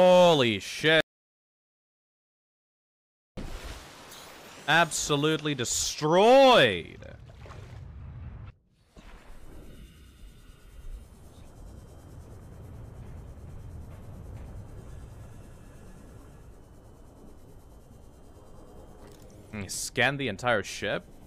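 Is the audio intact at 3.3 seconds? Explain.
No. At 3.3 seconds the input signal had been lost, most likely through a disconnected device, a failed link or an accidental mute, while the recorder kept writing silence. The result is an audio dropout to silence running from 1.01 to 3.37 s, about 2.37 s in all. The sound cuts off abruptly and resumes just after this point. The gap is dead digital silence with no room tone, and whatever occurred there is gone.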